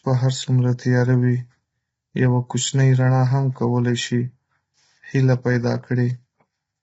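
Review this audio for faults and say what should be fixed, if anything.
Throughout, the speech sounds rough and grainy, with noise between harmonics and nothing above 7.8 kHz, likely heavy low-delay AAC compression (AAC-ELD) at around 16 kbps. Unlike a plain low-pass, the harmonics themselves are smeared. Raise the bitrate or use a longer-frame codec.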